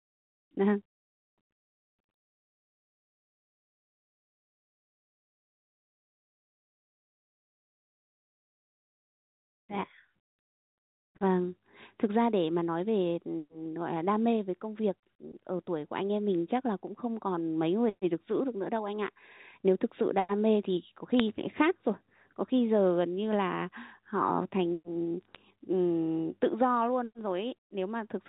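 At 15.39 s and 21.20 s, then across 25.21 to 25.35 s, bit errors on a digital phone line cause brief disturbances and a brief patch of crackle over the speech. Flipped bits in the G.711 mu-law stream corrupt individual samples, at an error rate of roughly 0.1 to 0.15 percent.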